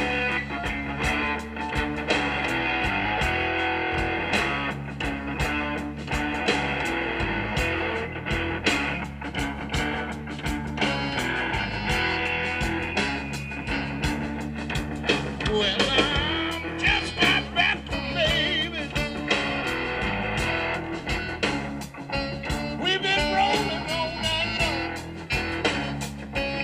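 The recording carries no audible technical faults, with the signal holding steady and intact for its whole duration.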